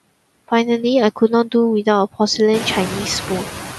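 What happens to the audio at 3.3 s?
Noise suppressor artifacts, present throughout the clip, affect 3.3 s. The room noise, louder since roughly 2.5 s, is pulled down by about 8 dB band by band. It dips between phrases and swells under speech, rather than switching fully off like a gate.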